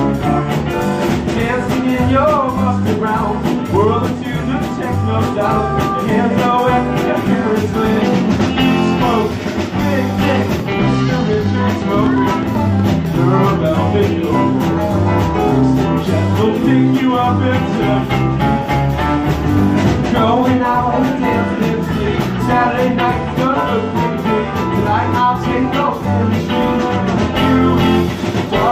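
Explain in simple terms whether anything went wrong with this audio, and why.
A train of clicks runs from 10.6 to 13.1 s: about twenty evenly spaced ticks, eight per second, most likely from electrical interference or a faulty connection.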